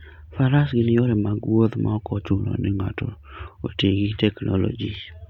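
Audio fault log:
2.24–3.53 s, drift correction step: the speech abruptly slows by about 6.3% and drops just over a semitone (112 cents), then snaps back right before "oti gi". It is likely a clock-matching playback-rate step. Unlike wow, the shift is steady, not wavering, and speed and pitch move together.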